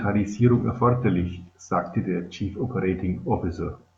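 Nothing here trips a technical alarm; the speech runs along with no dropouts, glitches or other faults to point to.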